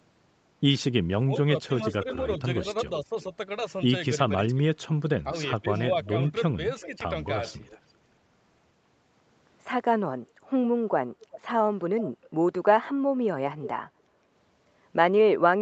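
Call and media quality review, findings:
Speech suppressed in double talk, 1.26–3.12 s and 4.52–7.01 s: voice ducks in brief dips of about 10 dB, then about 15 dB, roughly 300 ms and 200 ms in total. Likely echo canceller attenuating both talkers during overlap. Level is lost, with no added copy.

Echo leak, 1.61–3.23 s, 5.75–7.91 s, 11.21–13.7 s: faint repeat of the voice trailing by about 0.39 s, at about −25, −20, then −15 dB relative to speech. Likely residual loudspeaker echo passing the far-end canceller. Sound is added, with a fixed delay, unlike suppression.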